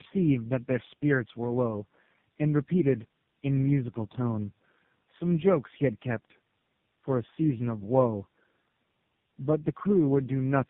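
Tandem speech coding runs throughout. The speech sounds re-coded by three speech codecs in a row, which fits AMR-NB, then GSM full rate, then AMR-NB again, each working on the last one's damage. It comes out rough, muffled and warbly, with nothing above 3.7 kHz.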